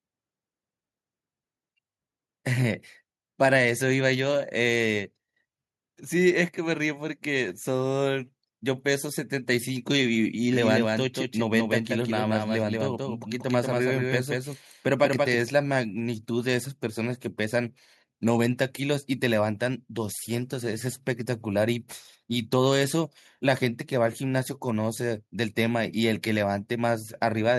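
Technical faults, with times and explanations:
10.5–15.4 s, doubled audio track: a second copy of the speech runs about a fifth of a second behind, roughly 5 dB quieter, with no room tail, and cuts in and out abruptly. Likely a slower capture path or misaligned edit layering two copies.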